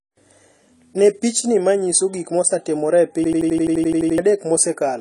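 Throughout the speech, the audio is dull and smeared, with nothing above about 11.5 kHz and a warbling, fizzy texture on sibilants. This is likely AAC compression at a low bitrate, around 32 kbps. The swirling artefacts distinguish it from a simple low-pass filter.

From 3.24 to 4.18 s, a system hang loop repeats one 85.33 ms fragment exactly, 11 times, as a rigid machine-gun stutter at 11.7 Hz. The loop length fits a 4096-sample buffer, and about a second of audio is lost. The identical repeats rule out an ordinary dropout or glitch.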